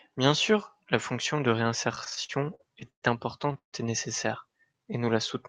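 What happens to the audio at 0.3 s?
Nothing goes wrong at 0.3 s: the speech there comes through intact, carried by a call path that sounds like it is working as it should.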